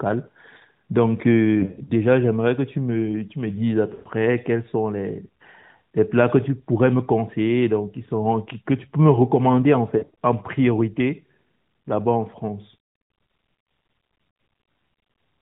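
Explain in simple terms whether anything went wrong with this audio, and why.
Lost AMR speech frames: radio errors spoiled short chunks of the mobile-call audio, so the decoder patched each gap by repeating the last good sound ever more quietly. That gives brief warbles, smears or dips at 1.60–1.92, 3.94–4.08, 9.98–10.17 and 14.30–14.34 seconds.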